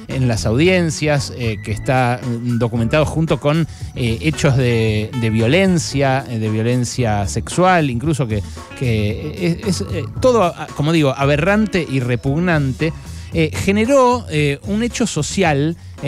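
No technical faults are audible anywhere in the recording.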